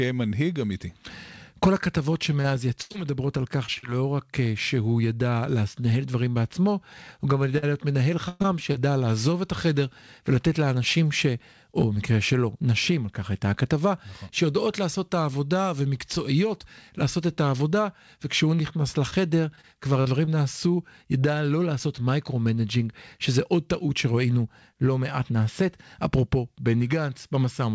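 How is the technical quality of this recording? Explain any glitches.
Three choppy stretches break up the speech, all from the same problem: repeated packet loss (robotic sound), at 2.42 to 3.89 s, 7.58 to 8.76 s and 19.10 to 20.29 s. Packets kept going missing, and each hole got patched by stretching out the last bit of sound. That gives the clipped, choppy texture, worst in the middle burst (gaps up to 116 ms). The bandwidth stops at 8 kHz, which fits a wideband call codec.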